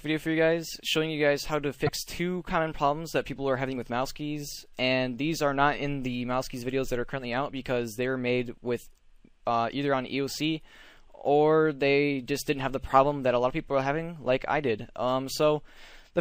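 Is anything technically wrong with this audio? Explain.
Yes. Right through the clip there's plainly audible MP3 compression, likely from a low-bitrate encode that fits around 64 kbps. The encoder has run short of bits, so the top end is cut off and weak detail flickers in and out between frames, leaving a watery, swirly texture and smeared attacks.

At 1.86 to 1.89 s there's damaged data in the compressed stream. A stretch of the file is corrupt, so the decoder misreads those frames and has to hunt for the next valid frame header. You hear it as a short glitch.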